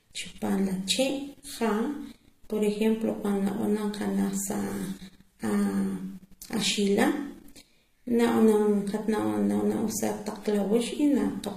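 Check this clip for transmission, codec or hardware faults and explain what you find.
The speech carries one fault: stacked lossy coding throughout, with nothing above 14.9 kHz and two different sets of codec artefacts heard at once. This is likely transcoding between lossy codecs, a low-rate HE-AAC stage, around 20 kbit/s, re-encoded to MP3 near 61 kbit/s. The MP3 spends bits reproducing the earlier artefacts and adds its own, while the lowest band limit in the chain stays.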